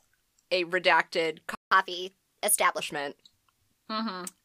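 Speech clip with a playback stall just after "a redacted": the sound cuts to silence from 1.55 to 1.71 s, a 0.16 s gap, likely because the player ran short of data. A waveform shows a flat line and a spectrogram a blank vertical band. A catch-up at higher speed follows from 1.71 to 2.80 s, with playback running at 1.15 times normal speed and pitch raised by about two semitones. On a spectrogram the harmonics sit higher and more widely spaced through that stretch before settling back.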